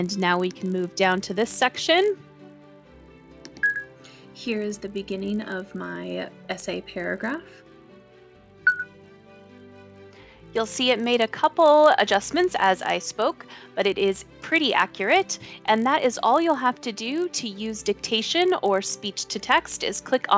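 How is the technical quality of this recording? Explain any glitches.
A steady 50 Hz buzz runs through the whole recording, present whenever there is signal. It comes from a resampler restarted on every block: each 20 ms block was converted separately, likely from 48 kHz down to 16 kHz, leaving a small error at every block edge.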